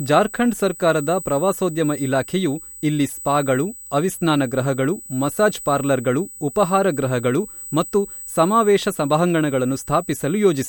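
USB whine runs through the whole clip as a steady, fixed-pitch tone at 8 kHz, sitting about 15 dB below the speech. That frequency matches the 125 microsecond microframes of a high-speed USB bus: each burst of current drawn on the bus leaks into the audio path through shared power or ground. The result is a thin, piercing whistle that never shifts in pitch.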